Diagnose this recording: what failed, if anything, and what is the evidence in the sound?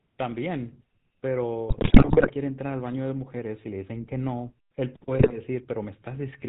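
The codec stage is at fault throughout: the GSM full-rate codec leaves the speech buzzy and gravelly, with nothing above 4 kHz. The crude pulse excitation and vocal-tract model cause the roughness, which fits 13 kbps full rate. Plain band-limiting would sound dull, not gritty.

GSM bit errors on the radio link corrupt the decoder's filter, pitch and gain values at 1.68–2.32 s and again at 5.18–5.33 s. The speech turns into squawks, pops and gargling. Packet loss would leave gaps; here the damaged frames still play, badly distorted and with level bursts.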